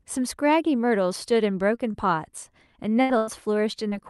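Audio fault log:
1.75 s and 1.91 s, short concealed packet loss: about 20 ms of the stream reached the decoder too late, twice in quick succession. Each time the receiver patched the hole by extending the sound just before it, imitating its pitch or, for unvoiced sound, its noise, then cross-faded back into the real signal. Each gap is heard as a brief smear or wobble.
3.01 to 3.11 s and 3.17 to 3.29 s, burst of packet loss: two runs of consecutive packets failed to arrive in time, the first costing about 80 ms and the second about 100 ms, with only a short stretch of real audio between them. The decoder kept extending the last sound while fading it down over each gap, so what plays is a held buzz or a dying hiss. The audio then resumes further on, with the content between each pair of times gone. Through the Opus call path, the top end stops at about 12 kHz.
3.89 s, short concealed packet loss: once more, about 20 ms of audio arrived too late and was replaced by a continuation of the preceding sound blended back into the real signal, giving another short smear near the end.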